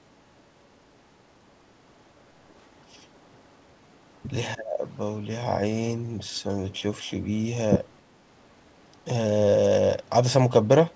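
From 4.55 to 4.86 s, the speech drops sharply in level. The deepest dip is around 20 dB, and the affected stretch lasts about 0.3 s. The voice seems to sink away and then return. This is likely speech suppressed in double talk. The far side was probably playing through the loudspeaker while this talker spoke. The echo canceller could not tell the talker from the echo, so it pulled both down together. The call path carries nothing above 8 kHz, which fits a wideband codec such as G.722.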